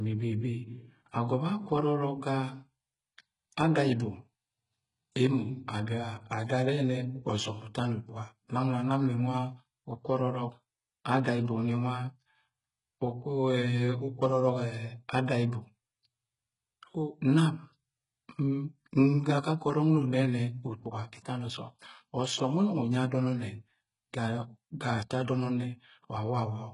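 From start to finish, the speech has likely been through HE-AAC compression at a very low bitrate, on the order of 12 kbps. Only the lower spectrum is coded properly, and the treble is rebuilt by copying lower bands upward under a coarse envelope. The damage is heavy: nothing survives above 11 kHz, the upper range sounds synthetic, and s sounds come out gritty, metallic and lispy.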